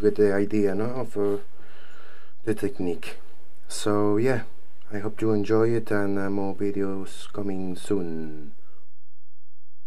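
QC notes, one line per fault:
Throughout, DC offset: a constant shift of about -23 dBFS pushes the waveform off zero, eating headroom and leaving steady energy at the spectrum's very bottom.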